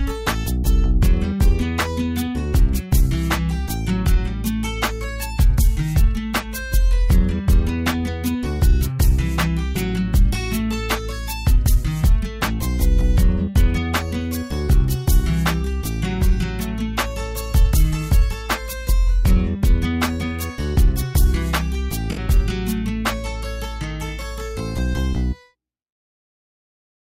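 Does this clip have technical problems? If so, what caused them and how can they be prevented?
Yes. An AAC frame loss with concealment occurs from 22.11 to 22.19 s, where roughly 64 ms of coded audio went missing, which fits about three consecutive frames. The decoder filled the gap from the last good spectrum, so the sound turns briefly smeared and noisy. On a spectrogram this appears as a short, blurred vertical band with tonal detail washed out. In the waveform, fine structure gives way to noise-like texture. It can be prevented by adding forward error correction or retransmission on the delivery path.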